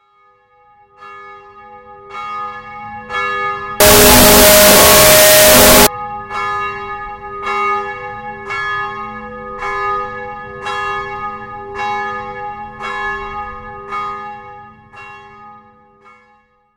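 From 3.80 s to 5.87 s the audio turns into a harsh wash of loud noise, with the original sound faintly buried underneath, running at half speed and dropping about an octave in pitch. This is a wrong sample width fault. The pattern fits 16-bit samples being read as unsigned 8-bit values. Each original sample gets split into two mismatched values, which halves the playback speed, and only the high bytes still carry a rough trace of the real waveform.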